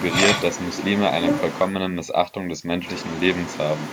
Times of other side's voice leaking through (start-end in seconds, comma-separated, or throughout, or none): 0.00-1.75, 2.82-3.92